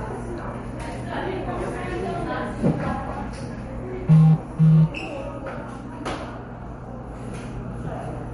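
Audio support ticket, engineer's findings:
Watery, swirly texture throughout, top end gone above 11.2 kHz, attacks smeared. Likely MP3 compression, lines dropping in and out per frame, fits a bitrate around 48 kbps.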